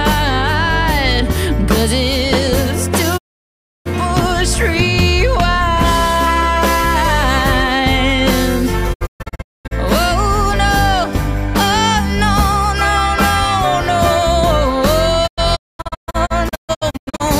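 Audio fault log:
3.16–3.88 s, digital broadcast dropout. The sound fades out over 20 ms and stays muted for 0.67 s. The receiver lost the signal or rejected failed frames, so it muted until good frames returned.
8.92–9.73 s, digital broadcast dropout. Several short holes are spread over 0.77 s, 0.54 s lost in all. The longest is 0.22 s. The hole lengths fit 32 ms frames.
15.26–17.22 s, digital broadcast dropout. The same broken pattern runs over 1.92 s, with 0.99 s lost and the longest hole 0.22 s.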